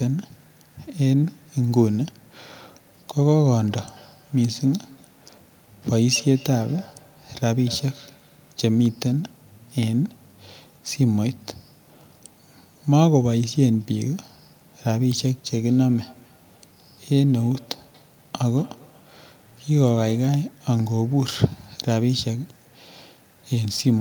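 Feedback echo between two devices appears from 3.68 to 8.67 s and again from 15.5 to 20.39 s. A second device in the room replays the speech into the microphone, which this device's echo canceller cannot remove, so repeats arrive roughly every fifth of a second, peaking at about −25 dB and −28 dB below the speech.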